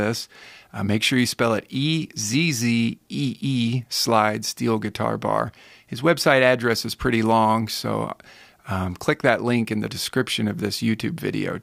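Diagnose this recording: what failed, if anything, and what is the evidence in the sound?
No fault detected anywhere.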